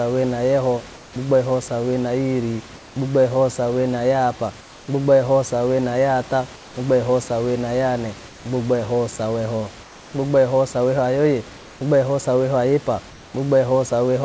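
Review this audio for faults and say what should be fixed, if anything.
Comfort noise in place of the background at 0.95, 2.75, 4.61, 6.56, 9.83, 11.57 and 13.10 s (after "saweho ayepa"): for 0.2 to 0.3 s in each pause, the room background becomes a steady, featureless hiss about 1 to 3 dB quieter, likely because the sender stopped transmitting during silence and the receiver synthesised filler noise. Disabling discontinuous transmission at the sender keeps the real background.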